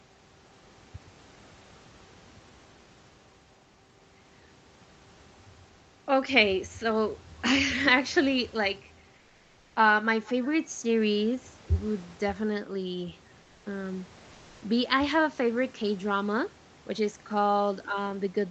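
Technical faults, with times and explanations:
9.17–9.75 s: comfort noise in place of the background. For about 0.58 s, in a pause in the speech, the real room noise drops out and a smooth, featureless hiss takes over, about 4 dB quieter than the background around it, which itself sits about 34 dB under the loud speech. That's likely Opus discontinuous transmission: the sender goes quiet when it detects no speech, and the receiver fills the gap with synthetic noise roughly matched to the room.
13.41–13.65 s: comfort noise in place of the background. Same thing again, shorter, about 0.24 s, with a smaller dip of about 2 dB, and the background here is about 32 dB below the loud speech. The texture of the room briefly flattens into that generic noise before the speech picks up, all in the narrowed call band that tops out at about 8 kHz.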